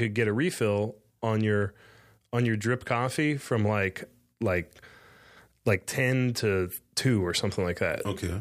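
Dropped samples occur at 1.62 s, just after "refill on", and at 2.48 s, just before "drip coffee from". Each is heard as a single click, a thin vertical line across the spectrum. The likely cause is a handful of samples, well under a millisecond's worth, going missing from the stream, so the waveform jumps straight from one value to a later one. The gap is far too brief to remove any audible sound; only the discontinuity is heard.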